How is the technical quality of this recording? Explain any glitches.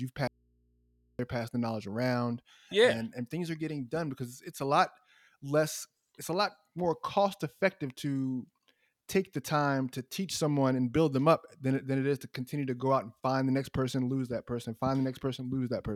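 There is one clear glitch, an audio dropout to a faint residue, from 0.27 to 1.19 s. For about 0.92 s the speech cuts out abruptly and leaves only a low mains hum, sitting roughly 40 dB below the normal level, before the voice snaps back mid-flow. The likely cause is a brief loss of the wanted signal while the input stayed open, so the hum of the live line fills the gap.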